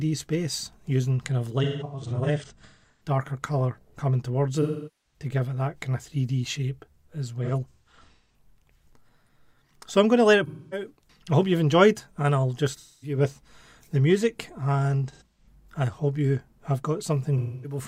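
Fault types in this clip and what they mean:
AAC frame loss with concealment: the decoder patches dropped AAC frames from the last good spectrum, leaving seven smeared, noisy patches between 1.63 and 17.78 s. A spectrogram shows blurred, flattened bands in bursts, and the waveform a hazy envelope.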